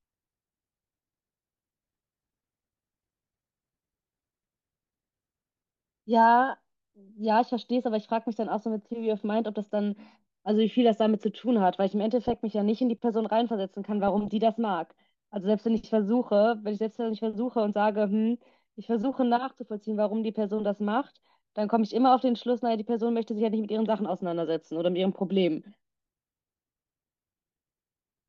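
Around 12.24 to 12.38 s the speech picks up a short patch of DAB burbling, and it comes back more heavily from 14.08 to 14.27 s. Weak reception lets a few bit errors, on the order of a third of a percent, slip past error correction into the MP2 data. Corrupted samples put short blips of noise in single sub-bands, and wrong scale factors make sub-bands jump in level for up to a frame. The second burst sounds busier, which points to roughly twice as many damaged frames.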